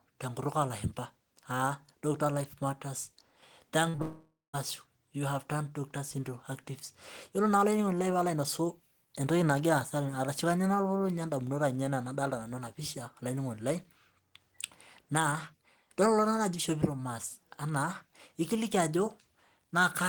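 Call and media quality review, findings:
Short concealed packet loss, 3.89–3.96 s: brief smear in the sound, about 40 ms of audio missing and covered by extrapolating the preceding sound before blending back. Jitter buffer/decoder concealment path.

Short concealed packet loss, 3.96–4.00 s: second wobble, 20 ms gap filled the same way. Back-to-back with the first, so a burst of late or lost packets.

Long network dropout, 4.02–4.55 s: buzz or hiss continuation fading to about 150 ms of silence, roughly half a second missing. Audio resumes at "you havedone". Likely a transport-level outage upstream of the receiver.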